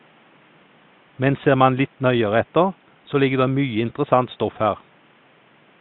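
A speech recording with no technical faults to point to. A low bed of room noise sits about 36 dB below the speech, part of the space where the microphone was rather than anything the system added.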